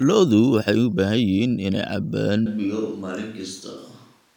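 From 2.46 s until the end, the speech turns abruptly roomy, hollow, bass-light and about 5 dB quieter: likely a switch to a distant microphone.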